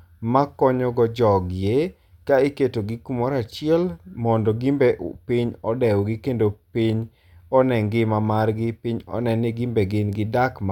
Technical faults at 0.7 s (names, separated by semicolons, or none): none